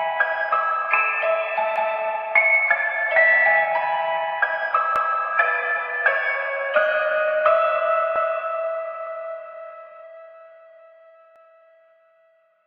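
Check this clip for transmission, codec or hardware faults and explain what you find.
One fault shows up: overlapping chunks. At 1.76, 4.96, 8.16 and 11.36 s, each 3-second chunk restarts 200 ms early, so that slice of sound replays, heard as a brief stutter.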